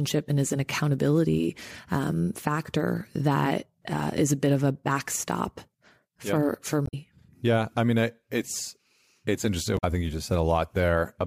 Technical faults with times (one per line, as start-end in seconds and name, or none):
6.83-6.94 damaged data in a compressed stream
9.74-9.84 damaged data in a compressed stream